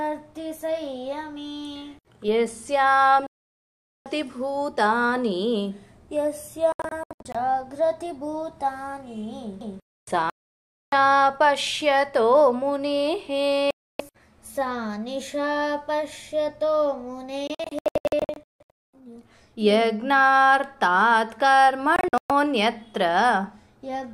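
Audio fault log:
3.27–4.06, 6.72–7.35, 10.30–10.93, 13.71–14.00, 17.47–18.70 and 21.96–22.31 s, digital broadcast dropout: the receiver loses good frames and mutes, so sound drops to silence. At 6.72, 17.47 and 21.96 s it breaks into several short holes. Whatever was sent during those gaps is gone.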